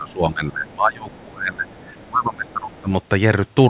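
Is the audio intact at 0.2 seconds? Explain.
No. At 0.2 seconds the speech is dipping, pushed down by as much as about 25 dB at its deepest, in a stretch running from 0.0 to 1.69 seconds. This is likely speech suppressed in double talk: with both sides speaking, the echo canceller could not tell the talker from the loudspeaker echo and turned everything down.

Just before that moment, from 0.09 to 0.13 seconds, a faint scrap of the other side's voice leaking through can be heard, roughly 30 dB below the speech. The echo canceller likely did not fully remove the far end's loudspeaker playback from the microphone.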